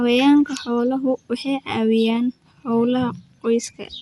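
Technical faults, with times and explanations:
Throughout: Dolby Digital compression, likely the cause of the dull, band-limited speech with a rough, fluttering grain around voiced tones. Nothing sounds above 11.5 kHz, and the coarse texture fits a bitrate near 64 kbps. The encoder drops the top band and gives many frequency lines no precision, so the decoder fills them with noise. On a spectrogram there is a hard ceiling at 11.5 kHz and speckled, patchy harmonics below it.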